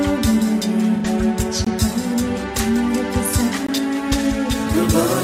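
From 0.96 to 1.06 s there is AAC frame loss with concealment. Roughly 85 ms of coded data is missing, which fits two lost frames. The decoder rebuilt that span from the preceding spectrum, so it sounds smeared and noisy, with a phasey blur before normal decoding resumes.

A gap between chunks appears at 1.65 to 1.67 s and again at 3.67 to 3.69 s. Each is a 20 ms hole of silence. They recur every 2 s, marking the joins where the audio was split and reassembled with dead time inserted between pieces.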